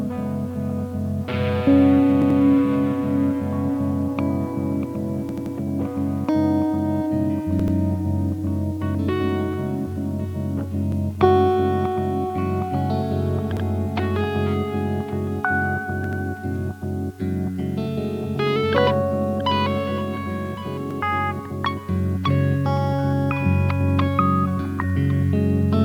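Repeated buffer stutters occur at 2.22, 5.29, 7.60, 10.92, 13.57, 16.04 and 20.91 s. Each time, new audio arrived late and the device replayed the last 85 ms block one to three extra times, which fits a 4096-sample buffer, producing a short stutter with hard joins.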